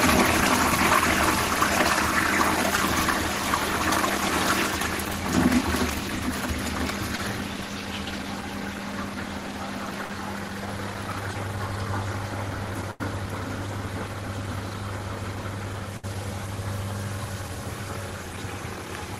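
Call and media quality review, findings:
Sample clock jitter, whole clip: hiss/roughness riding on loud and bright passages, gone in the quiet bits. Converter clock wobbling by a few microseconds, so samples land early or late. Error sits roughly 20 dB under the signal, worst on steep waveform slopes.

Short concealed packet loss at 2.76 s, 5.08 s and 7.16–7.19 s: quick smears or wobbles. Roughly 10, 10 and 20 ms never made it to the decoder. The receiver papered over each gap by extending the last sound, then blended back into the real audio.

Burst of packet loss at 10.04–10.10 s, 12.91–13.01 s and 15.97–16.04 s: short held buzz or fading hiss, then a jump ahead. About 50, 80 and 70 ms lost in a row. Concealment stretched the last sound and faded it out, and that stretch of audio is simply gone.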